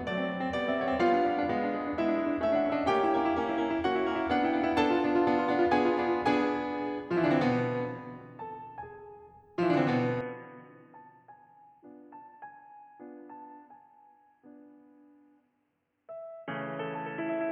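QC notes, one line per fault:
10.21 to 17.52 s: input switched to a poorer device. The music turns dull and boxy at once, with nothing above 3.3 kHz. It drops about 5 dB without a gap. A faint new background noise sits far below. The likely cause is a narrower-band input taking over.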